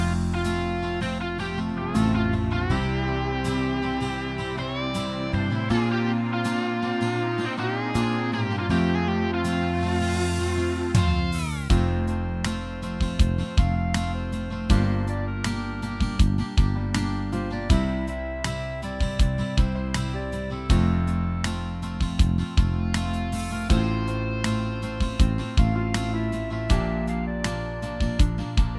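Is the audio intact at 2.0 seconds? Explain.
Yes, the audio at 2.0 seconds is intact, with no dropout, click, distortion or other fault at that point.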